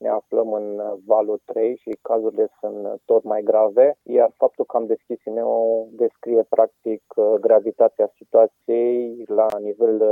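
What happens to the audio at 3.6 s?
Nothing goes wrong at 3.6 s; the audio plays through that moment intact, with no dropout, click or distortion.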